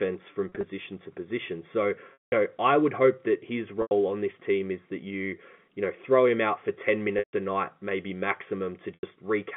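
Brief buzzy held tones, and in longer gaps a fade to silence, interrupt the speech at 0.49 s (scattered, before "to position"), 2.13 s (190 ms, before "know I would hope"), 3.82 s (after "would hope that his"), 7.19 s and 8.94 s. This is packet loss with pitch repetition: lost packets were bridged by repeating the last pitch period.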